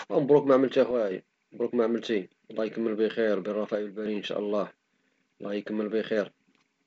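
Speech clip carried over G.722 wideband coding, with nothing above 7.8 kHz. Level drops abruptly by about 6 dB at 0.91–1.11 s and 3.75–4.06 s, likely one channel dropping out before the mono sum.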